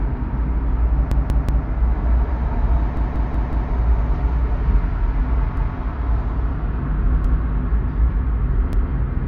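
A stuttering loop of one short piece of sound, about 186 ms long, replays with a hard join at each pass at 1.12–1.67 s, 2.97–3.72 s, 5.57–5.76 s, 7.25–7.43 s and 8.73–8.92 s. This is a repeated buffer. Fresh audio arrived late, so the device replayed its last block, whose length fits an 8192-sample buffer. The block plays three extra times in the first event, four in the second and once in each of the last three, with essentially nothing lost.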